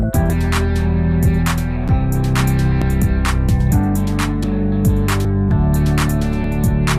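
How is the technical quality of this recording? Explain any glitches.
Six abrupt skips disrupt the recording. Dropped buffer (overrun) at 0.30, 1.88, 2.82, 4.44, 5.25 and 6.44 s: the sound jumps ahead without any silence, losing roughly a tenth of a second at the first and about 40 ms at each later one. The likely cause is software not reading samples before the hardware overwrote them, leaving the remaining audio spliced together.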